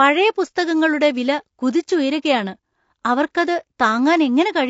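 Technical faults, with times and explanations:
Throughout: low-delay AAC compression. The speech sounds rough and grainy, with a hiss of noise filling the gaps between the harmonics. The top band is dulled or synthetic-sounding. The damage is plainly audible. The likely cause is a low-delay codec such as AAC-ELD. Its short frames give coarse frequency resolution, and at a low rate bits run short. The degree of damage fits a low rate of around 32 kbps.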